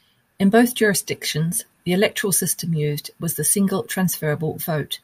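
Nothing stood out on listening to this speech recording.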